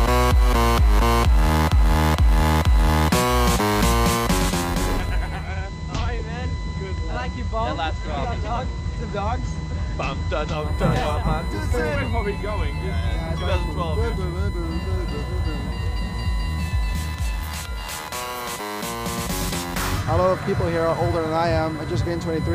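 USB whine runs through the whole recording, a steady 1 kHz tone about 20 dB below the signal, where current drawn in the bus's 1 ms frames leaks in through power or ground. Digital radio blending to analogue occurs from 5.35 to 10.67 s: the receiver lost the digital stream and cross-faded over 176 ms to the station's FM broadcast, so the level drops about 2 dB, and hiss rises to roughly 30 dB below the signal before it blends back.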